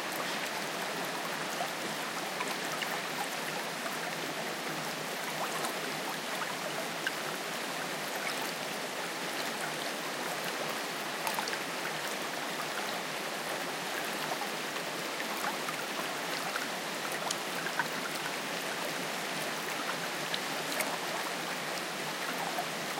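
A brief garbled flutter occurs at 6.96–7.10 s and again at 13.16–13.35 s. Both are frames out of order: two adjacent runs, about 70 ms and 93 ms each, were decoded swapped, so each stretch plays with its halves exchanged and nothing is lost.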